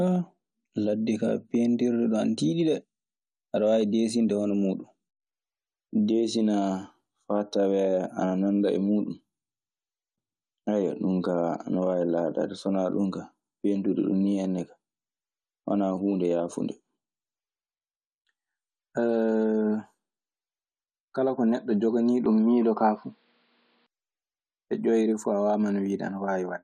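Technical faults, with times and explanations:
22.26 to 23.86 s, input switched to a poorer device: for about 1.6 s the speech turns dull and boxy, with nothing above 5.2 kHz and a faint new background noise sitting well below the speech, around 45 dB down. The change is abrupt but leaves no gap, and loudness barely moves. The likely cause is the recording input swapping to a narrower-band microphone or headset call profile, whose own tone and noise floor briefly replace the original pickup.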